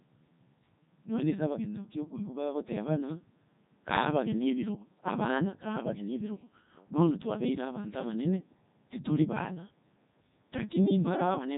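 Throughout, the speech shows heavy Codec 2 vocoder damage. The voice is rebuilt from sine waves, sounding robotic and buzzy. Nothing passes 3.8 kHz, which fits 3.2 kbit/s.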